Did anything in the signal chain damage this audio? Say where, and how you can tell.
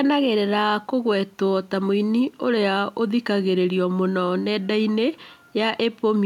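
No, nothing in this speech recording stood out on listening as damage from any stage of the signal chain.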